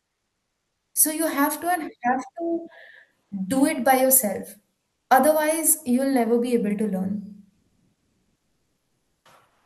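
A speech clip in which the background between phrases is three times replaced by comfort noise: at 3.23–3.31 s, about 12 dB quieter; at 7.53–9.25 s, about 2 dB louder; and from 9.47 s to the end. On a spectrogram these stretches show a smooth, textureless noise band, likely from Opus discontinuous transmission. At 3.29 s the next sound has its onset clipped by the voice detector, likely because detection lagged by about 20 ms, leaving an abrupt vertical edge with no ramp-up in the waveform.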